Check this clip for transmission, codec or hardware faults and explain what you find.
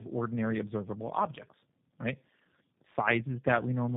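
One fault runs through the whole clip.

Tandem speech coding, from start to finish: the audio points to two G.729A stages at 8 kbit/s joined by a G.711 mu-law link, so the second coder re-encoded already degraded speech. It sounds rough, muffled and warbly, with nothing above 3.7 kHz.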